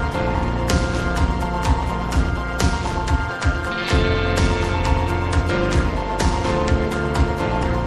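The audio carries a metallic buzz throughout. Its level rises and falls by about 11 dB around 200 times a second. That is overlap-add ripple: the frames were rejoined with an overlap whose gains do not sum evenly, so the level dips once per frame.

The whole clip also sounds watery and swirly, with dulled treble and smeared attacks. Weak detail flickers in and out. This is likely MP3 compression, and the damage is plainly audible, which fits a low bitrate around 64 kbps.

At 0.33 s, 3.28 s and 7.62 s the audio jumps ahead by about 150 ms. Each join is a brief smeared blip, not a click. These are compressed frames skipped, several 26.1 ms frames lost at once.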